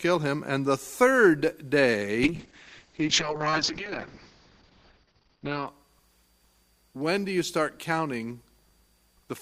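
From 2.25 to 5.73 s a call bitrate drop narrows the audio to about 6 kHz and makes it watery and rough, which fits a fall from around 96 kbps to about 6 kbps. Unlike packet loss, nothing drops out; the sound stays continuous but coarsely coded.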